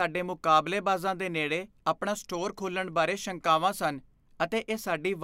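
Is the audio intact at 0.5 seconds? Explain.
Yes, the audio is intact at 0.5 seconds, with no audible fault at that moment.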